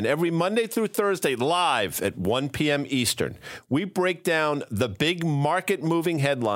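No technical faults can be heard anywhere in the recording.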